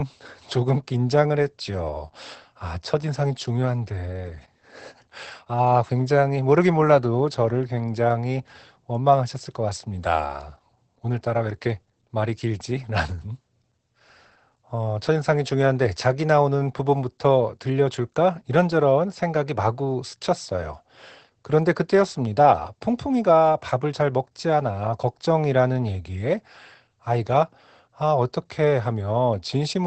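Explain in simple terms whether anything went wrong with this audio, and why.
Throughout the recording the speech sounds muffled, hoarse and a little robotic, with nothing above about 8.5 kHz. That is Opus voice compression squeezed hard: its speech coder trims the upper frequencies and describes the voice's fine texture only roughly.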